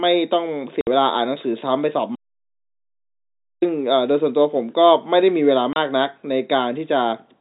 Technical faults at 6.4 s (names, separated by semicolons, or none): none